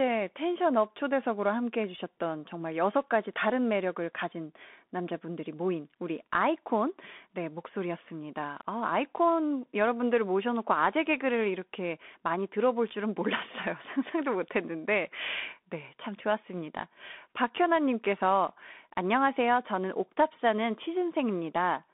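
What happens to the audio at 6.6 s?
At 6.6 s, as throughout, the speech sounds narrow, scratchy and hissy: the Bluetooth CVSD headset codec passes only 200 Hz to 3.6 kHz, and its one-bit steps lag.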